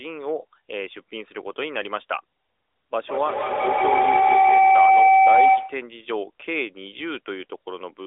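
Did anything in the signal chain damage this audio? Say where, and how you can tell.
Yes. A feedback howl damages the call from 3.05 s to 6.02 s. The stage is the acoustic loop around call processing. Sound from one device's loudspeaker reaches another microphone in the same room and returns with more level each trip. You can hear a tone near 700 Hz build over the speech, peaking about 10 dB above it. It pulses roughly every 150 ms, the loop's delay, and stops when the loop is broken.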